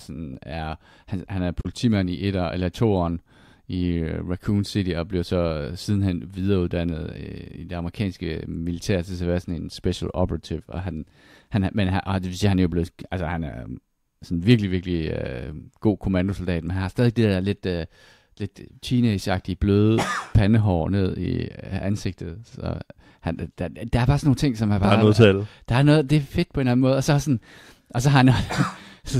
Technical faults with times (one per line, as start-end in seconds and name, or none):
1.61-1.65 digital broadcast dropout